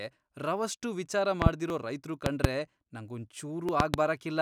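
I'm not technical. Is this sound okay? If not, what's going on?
No. There are two problems in this speech recording.

The first is a loud pop, heard three times, each as a pair of sharp pops: at 1.42 to 1.49 s, 2.26 to 2.47 s and 3.80 to 3.96 s. The pops are far louder than the speech, which keeps going underneath. The likely cause is a sudden electrical jolt, such as a plug, a switch or static, entering the signal.

The second is audio missing between chunks, at 1.70 s and 3.69 s. At each point a few thousandths of a second of sound are dropped and the two sides are joined directly. This causes a tiny skip. The likely cause is the recording software handling the sound in one-second chunks and losing a sliver at each handover.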